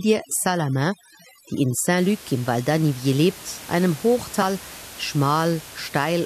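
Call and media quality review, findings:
Overdone noise removal, 0.00–1.98 s: reduced background with twinkling specks. The denoiser is pulling noise-level bands down hard. Spectrogram shows a blotchy, gated floor with isolated flecks.

Compressed frames skipped, 1.79 s and 4.41 s (after "lebt einem"): audio jumps ahead by about 20 ms, then about 50 ms. The decoder drops one or two frames, which fits 23.2 ms frames. Waveform shows a short discontinuity.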